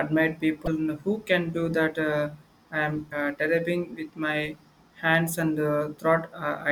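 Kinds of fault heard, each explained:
Damaged data in a compressed stream: corrupted bytes in the encoded speech made the decoder misread frames and lose sync until it found the next valid frame header, leaving two brief 40 ms glitches, at 0.64–0.68 s and 3.09–3.13 s.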